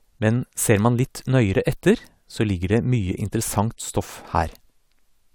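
Speech recording with no audible technical faults anywhere in the clip.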